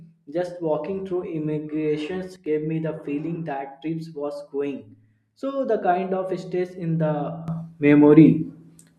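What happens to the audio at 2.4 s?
A digital gain setting was likely applied instantly with no ramp, so the level drops by about 12 dB from one sample to the next. This sudden gain jump spans 2.36 to 2.46 s. The speech and the background noise fall together, because the change scales the whole signal at once. The result is an abrupt step down in loudness lasting about 100 ms rather than a smooth fade.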